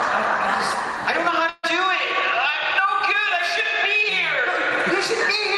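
A burst of packet loss hits the audio from 1.49 to 1.65 s: roughly 140 ms went missing in transit, so the receiver stretched the last sound it had, fading it out over the gap, before playback picks up again later with that stretch absent.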